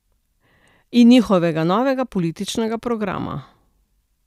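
No technical faults can be heard anywhere in the recording. Nothing in the speech calls for a technical explanation.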